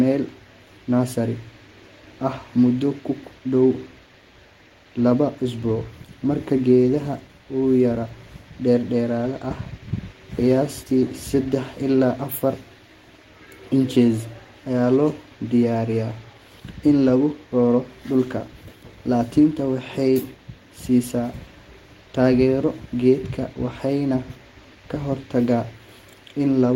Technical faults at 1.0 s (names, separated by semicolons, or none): none